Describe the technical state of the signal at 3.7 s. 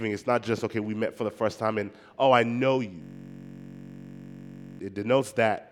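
At 3.7 s the system has frozen in a system hang loop running from 3.02 to 4.79 s: the driver stalled while the hardware kept replaying one 21.33 ms slice, which fits a 1024-sample buffer. That exact repetition turns the speech into a steady buzz at about 47 Hz.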